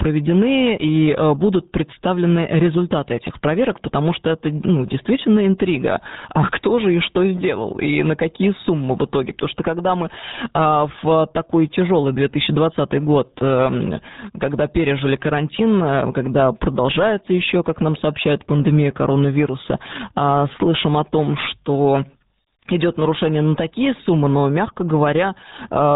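From start to finish the speech carries heavy RealAudio 14.4 codec damage, the artefact of RealAudio 1, a speech coder built for dial-up modems. The sound is consistent with a stream of about 8 kbit/s. At that rate the coder discards all content above 3.8 kHz and rebuilds the rest from coarse parametric approximations, so the voice sounds muffled and boxed-in, with a gargling, warbly texture.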